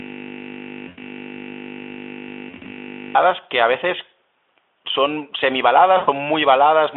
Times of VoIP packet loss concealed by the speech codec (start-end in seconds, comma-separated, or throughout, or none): 0.87-1.03, 2.49-2.72, 5.97-6.09